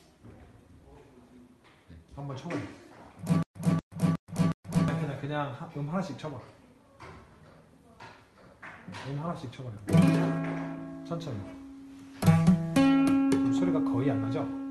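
A stutter with silent gaps runs from 3.43 to 4.88 s: a 236 ms burst repeats four times, each followed by 128 ms of digital silence, likely from a stalled stream replaying its last fragment. The audio is band-limited to about 12 kHz, consistent with a low-bitrate Opus call path.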